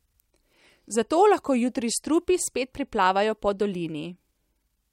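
No technical faults appear at any point in the speech.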